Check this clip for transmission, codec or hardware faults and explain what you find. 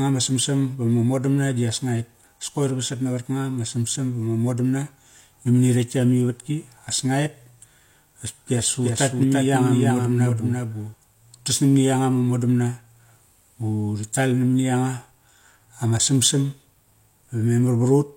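One fault is present. From 8.56 to 10.94 s the speech has a doubled audio track: a second full-band copy trails roughly 300 ms behind, around 5 dB quieter, likely from the signal being picked up again through a slower path. It sounds like a dry, flat echo with no room tail, and it starts and stops abruptly. On a spectrogram, each syllable's pattern repeats shifted right, and the waveform shows matching envelopes offset in time.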